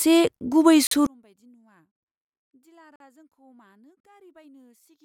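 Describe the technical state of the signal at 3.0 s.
A gap between chunks runs from 2.96 to 3.00 s: a 44 ms hole of silence with hard edges between segments of stored or streamed audio. Nothing is lost, but the speech is cut off and resumes abruptly. The timing fits chunks about one second long.

Underneath, from 1.07 s onward, the speech has collapsed by about 38 dB into a faint residue when summed to mono, the likely cause being one channel inverted so the centred content cancels against its opposite.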